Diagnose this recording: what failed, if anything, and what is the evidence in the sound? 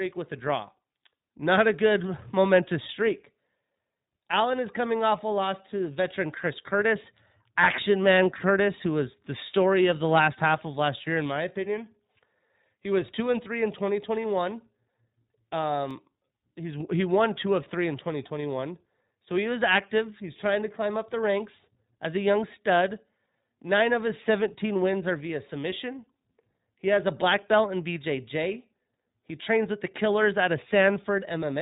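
The fault is at the codec stage. The whole recording carries iLBC codec damage, and it is plainly audible. Nothing passes above 3.8 kHz, so the sound is narrowband and dull. The speech stays clear but has a rough, synthetic edge. The coder models the excitation of each short frame on its own, without using the previous frame. The character of the artefacts fits 20 ms frames in the 15.2 kbps mode.

The second fault is at the driver or buffer stage. At 15.91 s there is a block of digital silence 2.18 ms long. The output drops straight to zero and comes straight back with no fade. The two hard edges are so close together that they merge into a single short tick. This is most likely an output buffer that was not filled in time, leaving zeros where the samples should have been.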